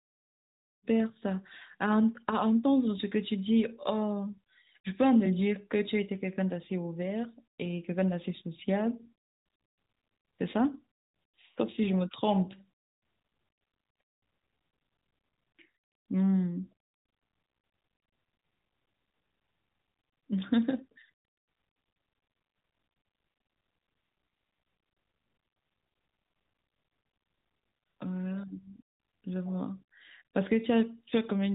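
Nothing here counts as a fault; the speech comes in on a gentle fade near the start and simply carries on from there without any trouble worth pointing out.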